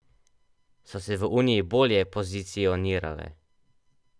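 No technical faults can be heard anywhere in it.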